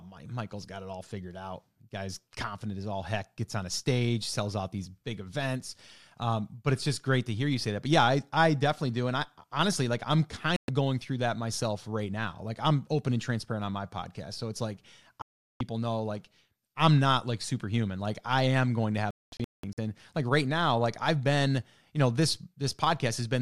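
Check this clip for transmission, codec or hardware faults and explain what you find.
The speech is interrupted three times by a digital broadcast dropout. Each time the receiver stopped getting decodable frames, either because the signal was lost or because frames failed their checks, so it muted until valid data resumed. From 10.56 to 10.69 s there is a 120 ms gap. From 15.22 to 15.61 s roughly 0.38 s is silenced. Between 19.11 and 19.78 s the loss breaks into several short holes spread over about 0.67 s, totalling 480 ms, with the longest about 0.22 s. Whatever was spoken in those holes is gone.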